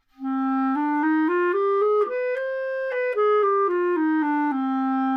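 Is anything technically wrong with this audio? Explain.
No, nothing technically wrong is audible in this recording.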